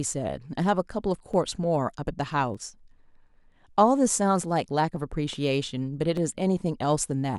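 A click recurs every 1.21 s from 0.13 s to 7.38 s, about seven times; that regularity, unlike random dropouts, points to likely clock drift buffer slips.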